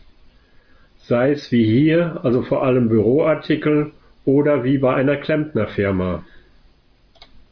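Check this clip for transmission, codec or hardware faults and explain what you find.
Nothing wrong turns up here; the speech comes through with no dropouts, glitches or other transmission or hardware trouble to point to.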